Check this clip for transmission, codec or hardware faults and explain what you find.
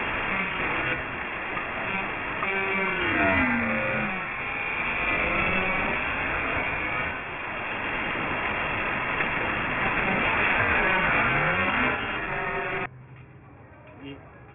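One fault runs through the whole clip: aliasing.

Aliasing, present from start to finish. The audio was resampled down without an anti-alias filter, and the fold point at 3 kHz points to a new rate of about 6 kHz from an original 48 kHz. Everything above 3 kHz mirrored back below it onto unrelated frequencies, with alias energy sitting around 10 dB. The result is a gritty, metallic haze on high-pitched sounds, and the spectrum runs hard up to the 3 kHz edge.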